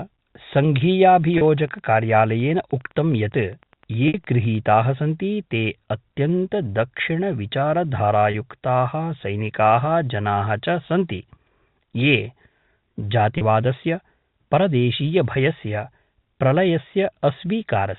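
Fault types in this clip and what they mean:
Wi-Fi interference: a nearby radio's beacon rectified by the circuit, ticking faintly ten times a second from 1.0 to 4.6 s; spectrograms show thin vertical stripes 102.4 ms apart.
Packet loss with pitch repetition: lost 30 ms stretches, and one of 60 ms at 4.1 s, filled by repeating a pitch period; the waveform shows identical consecutive cycles.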